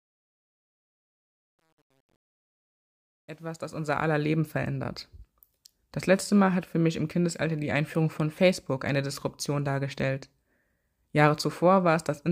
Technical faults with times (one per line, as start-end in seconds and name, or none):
0.00-4.26 truncation distortion on a fade